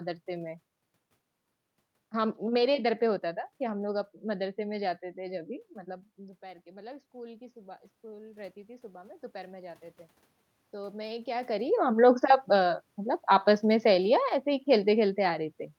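Around 5.5 s the talker moves away from the microphone, and the speech level drops by about 18 dB. From 6.15 s to 9.86 s the automatic gain rises to compensate. The gain control has sensed a quiet input and is slowly turning itself up, by about 8 dB over nearly four seconds. You hear the speech and the room noise swell together. The background climbs along with the voice, and the level keeps creeping upward.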